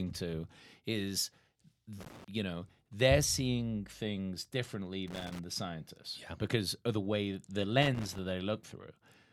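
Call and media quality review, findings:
Loose connector crackle, 2.00–2.28 s, 5.08–5.39 s, 7.82–8.18 s. Irregular scratchy bursts chopping the speech, each roughly a third of a second. Probable component: worn or dirty plug or jack on the mic or headset lead. Mechanism: contact making and breaking as the cable moves, gating the signal on and off. Recurs at uneven intervals, consistent with handling rather than steady interference.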